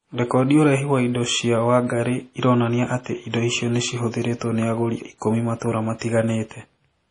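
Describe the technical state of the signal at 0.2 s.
At 0.2 s the speech already carries heavy MP3 compression damage, and it runs through the whole clip. The sound is watery and swirly. Sibilants chirp with a metallic edge, and consonant attacks smear. Nothing is left above about 10.6 kHz. The likely cause is an encoder starved of bits, consistent with a rate near 32 kbps. It chops the treble at a fixed point and drops weak frequency lines, which flicker on and off between frames.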